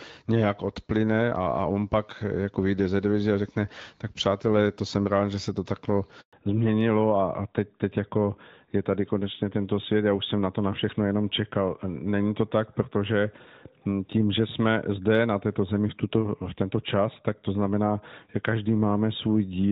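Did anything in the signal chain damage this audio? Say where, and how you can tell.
Yes. A handover gap at the network stage: after "že se to takhle" the speech drops out completely from 6.21 to 6.33 s. The call was switched between networks and no speech frames arrived for that 120 ms, so the sound cuts to silence and whatever was said there is lost.

A fallback to narrowband at the codec stage follows the handover. From 6.33 s to the end, the call moves from AMR-WB at 12.65 kbit/s, which until then gives light coding damage, to AMR-NB at 12.2 kbit/s. Nothing above 4 kHz remains, so the voice sounds duller and rougher.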